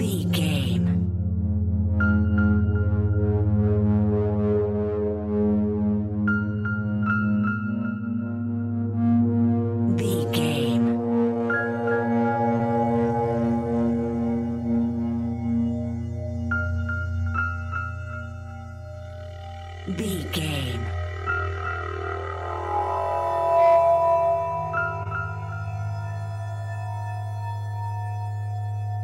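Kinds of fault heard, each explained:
short concealed packet loss: Brief smears or wobbles near 12.57 s and 25.03 s, each under a twentieth of a second, where about 20 ms of audio failed to arrive in time and the receiver extended the preceding sound to cover the gap before blending back.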